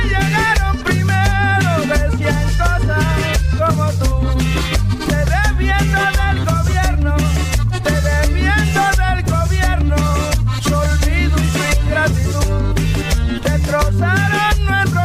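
No technical faults are audible anywhere in the audio.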